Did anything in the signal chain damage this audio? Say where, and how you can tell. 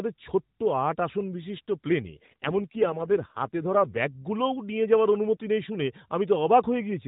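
Yes. From 2.03 to 3.99 s, just after "ছোট্ট আট আসন বিশিষ্ট", the speech turns buzzier and more synthetic, which fits an AMR rate drop from the 12.2 kbps mode to about 5.9 kbps at the codec. Unlike packet loss, there's no gap and the narrowband bandwidth doesn't change.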